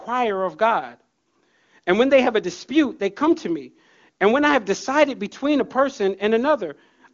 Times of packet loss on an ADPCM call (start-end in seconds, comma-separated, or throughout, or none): none